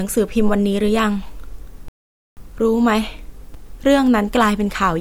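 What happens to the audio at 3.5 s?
At 3.54 s, chunks play out of order. One 5.33 ms chunk arrives a chunk late, leaving three hard joins and a brief garbled jumble in the speech.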